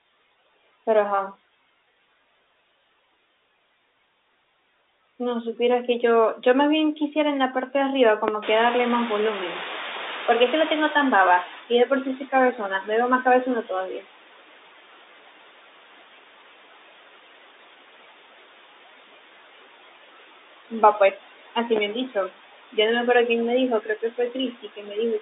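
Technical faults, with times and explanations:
Throughout, noise suppressor artifacts: the suppressor pulls steady background noise down by about 16 dB frame by frame, so the noise dips between phrases and swells back under the speech.
8.3 s, loud pop: a single sharp pop sits on top of the speech, peaking roughly 20 dB above it, while the speech continues underneath. A brief voltage step from a plug, switch or static discharge is the likely cause, shaped into a click by the following circuitry.
8.42 to 11.62 s, noise suppressor catching up: the room noise jumps by about 18 dB near 8.5 s and passes through with little reduction at first. Over about 3.2 s the suppressor's noise estimate adapts and the noise sinks, settling at a cut of about 13 dB.
21.8 s, loud pop: another single pop, roughly 15 dB above the speech, lands over the ongoing audio, which carries on beneath it. Likely a short electrical transient such as a switch or static, turned into an audible pulse by the downstream stages.
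23.81 to 24.35 s and 24.62 to 24.96 s, speech cut by the noise suppressor: with the background noise now only about 14 dB below the speech, the suppressor mistakes soft parts for noise. Quiet segments totalling around 150 ms in each span drop by up to about 11 and 13 dB and sound swallowed.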